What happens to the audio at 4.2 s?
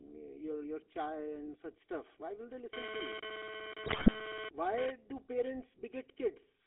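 At 4.2 s the speech is hit by two overlapping events, on top of two faults present throughout the clip.

GSM bit errors run from 3.86 to 4.23 s, so 4.2 s falls at their tail. Corrupted bits, which fit an error rate around 5 percent, scrambled the decoder's filter, pitch and gain values frame by frame. The voice gargles, squawks and pops. On a spectrogram this shows as blocky, mismatched spectral slices. On the waveform it shows as sudden level jumps at frame boundaries.

GSM phone buzz starts at 2.73 s, just after "will they", and lasts to 4.90 s. A nearby handset's data bursts at about 217 Hz are rectified into the audio, giving a hard, rasping buzz at about 2 dB below the speech that comes and goes. A spectrogram shows a stack of harmonics spaced 217 Hz apart. The waveform shows pulsed, comb-like bursts.

Throughout the clip, channel delay (comb filtering) from one channel lagging by about 3 ms before the mono sum cuts notches near 200 Hz and at even steps above. 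The result is a hollow, phasey tone, seen on a spectrogram as fixed dark horizontal stripes.

The GSM full-rate codec also runs throughout, fitting 13 kbps. It confines the audio to 250 Hz to 3.5 kHz and adds a buzzy, gravelly roughness. A spectrogram shows nothing above 3.5 kHz and smeared harmonic detail.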